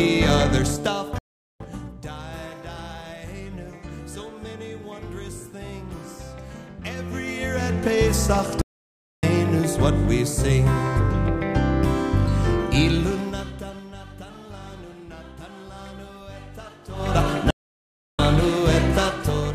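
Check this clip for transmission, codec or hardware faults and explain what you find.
Two faults are present: three playback stalls and one stretch of zipper noise.

Playback stall: the sound cuts to silence at 1.18 to 1.60 s (0.42 s), 8.61 to 9.23 s (0.61 s) and 17.51 to 18.19 s (0.68 s), then resumes. The likely cause is the player running short of data or its thread being held up, so output halts until it catches up. Unlike a dropout from packet loss, each gap is a clean, sustained silence lasting hundreds of milliseconds rather than a brief hole.

Zipper noise: from 12.86 to 13.89 s the level falls by around 20 dB in 2 dB jumps, about ten per second, with no smoothing between them. Each jump puts a small discontinuity in the waveform, heard as a rapid ticking riding on the sound as it fades.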